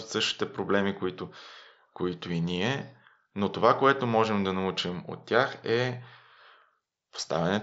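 Speech, with no technical faults to report.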